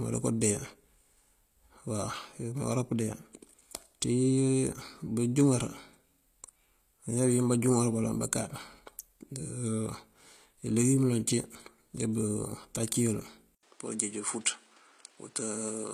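Throughout, the audio carries plainly audible HE-AAC compression damage: treble rebuilt from lower bands sounds synthetic, nothing extends above 14.9 kHz, and the character fits a low bitrate near 24 kbps. At 13.55 s, after an 80 ms silence, the band narrows to 10.8 kHz, the level drops about 5 dB and new noise appears around 30 dB down, likely the input switched to a poorer device.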